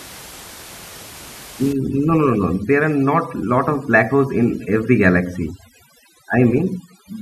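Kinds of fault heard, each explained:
Overdone noise removal: from 1.73 s on, heavy band-by-band suppression leaves twinkling specks in near-silent gaps, unlike steady room noise.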